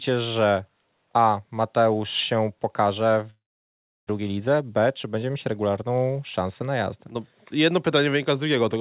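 Just after "się pokaże", at 3.3 s, the audio stops arriving in what is likely a long network dropout, lasting until 4.11 s. The receiver stretches the last sound into a brief fading buzz, then holds silence for about 0.69 s, and about 0.6 s of the original is never heard. On a waveform the envelope decays into a flat line. A spectrogram shows a smeared, repetitive band thinning into an empty gap before the sound resumes.

From 4.19 s to 5.83 s, ending just before "szansę na jazdę", a jitter buffer speed-up drains the backlog that built up behind the gap. Short pitch-period slices are cut out again and again, so the audio runs at about 110% speed with its pitch unchanged, sounding hurried. About a fifth of a second is removed in total. The spectrogram keeps the same harmonic spacing while syllables look compressed in time, and the waveform shows tiny splices between periods. Across the whole clip the band stops at 4 kHz, as expected from the G.711 A-law call path.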